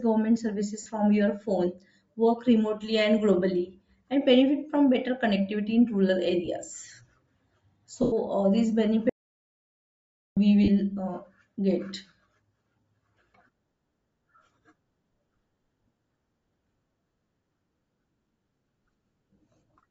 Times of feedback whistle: none

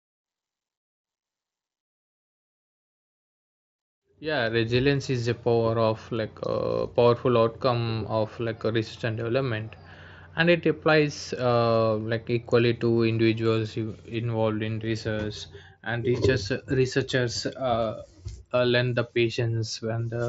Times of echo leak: none

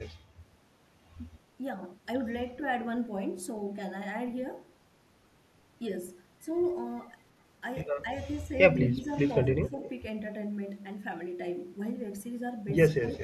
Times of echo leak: 9.00-9.04, 9.67-9.90, 13.07-13.17

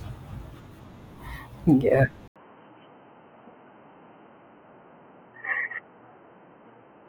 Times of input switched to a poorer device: 2.28-7.08

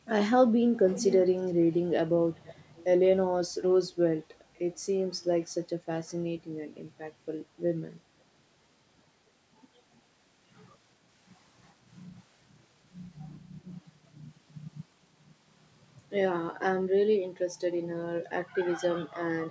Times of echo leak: 0.92-1.76, 2.35-2.84

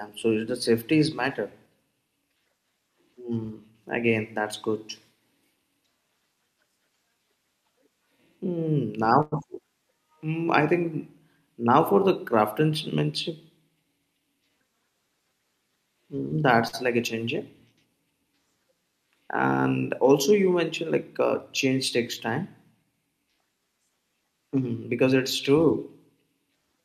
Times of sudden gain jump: none

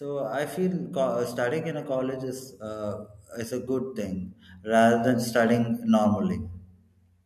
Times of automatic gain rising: 0.05-5.75

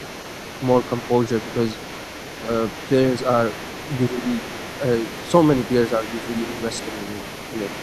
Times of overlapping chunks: none

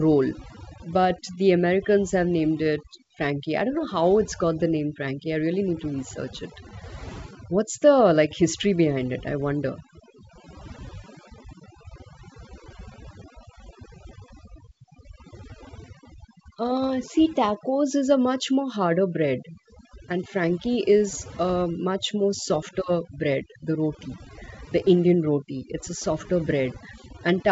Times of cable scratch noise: none

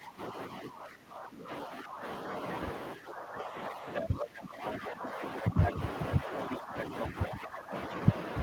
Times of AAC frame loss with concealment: none

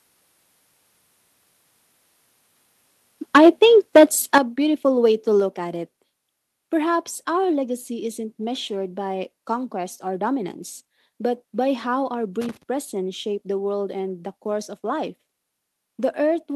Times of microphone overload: 3.35-3.65, 3.95-4.04, 4.34-4.38

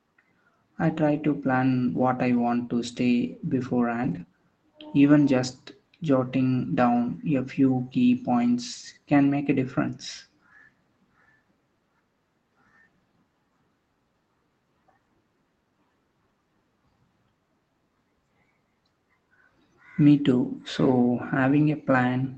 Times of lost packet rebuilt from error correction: 4.03-4.21

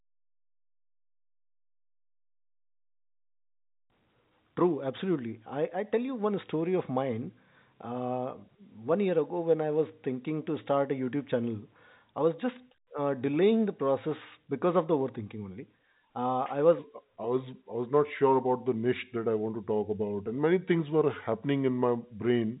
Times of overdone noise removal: none

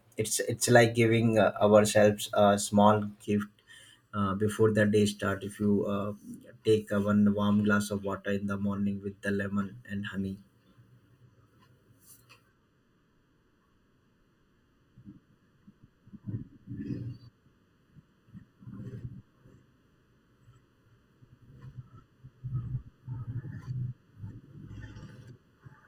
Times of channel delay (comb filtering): 3.25-25.87

